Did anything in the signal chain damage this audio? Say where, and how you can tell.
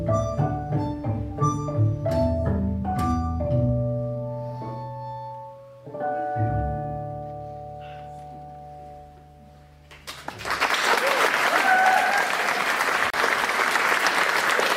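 Yes, there is a digital broadcast dropout in the reception and decoding stage. At 13.10 s the sound drops to silence and comes back at 13.14 s, a gap of about 32 ms. That length fits a single lost frame: the receiver muted when a frame failed or went missing, then resumed with the next good frame, so that slice of the programme is gone. Unlike a buffer underrun or a concealed packet loss, nothing is repeated or smeared across the gap. There is a clean muted hole.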